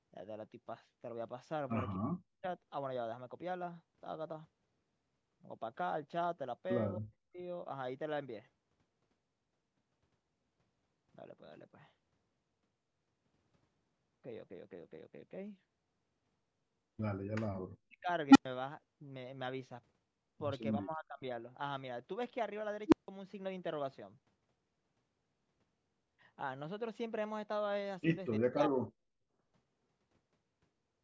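Between 1.99 and 2.45 s the speech sinks abruptly by about 40 dB, and it does so again at 6.98–7.39 s and 17.47–18.09 s. This is speech suppressed in double talk, likely caused by an echo canceller that mistook the near talker for loudspeaker echo while both sides spoke and attenuated the whole signal. It sounds like the talker fading out or breaking into fragments. On a waveform the envelope collapses to a thin trace, and on a spectrogram the harmonics turn pale across the band.

At 18.30 s an unstable filter takes over. A tone near 300 Hz swells within about 50 ms to a loud squeal, clips and then drops to 100 ms of silence as the filter resets. The waveform shows a rapidly widening sinusoid flattened where it clips and followed by a flat line. The spectrogram shows a bright horizontal stripe at 300 Hz that ends in a gap.

A milder suppression of about 25 dB follows at 20.82–21.31 s. A second squeal at 22.87 s has the same 300 Hz build-up over roughly 50 ms and ends in a longer silence of 160 ms.

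A last deep drop of about 40 dB at 28.4–28.97 s dims the speech again.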